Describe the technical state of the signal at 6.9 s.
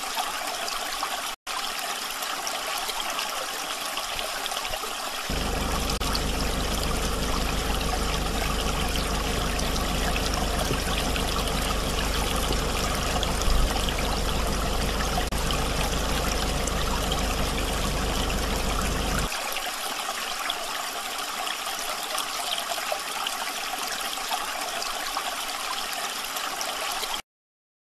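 At 6.9 s the signal is intact, with no dropout, distortion, glitch or other fault audible at that point.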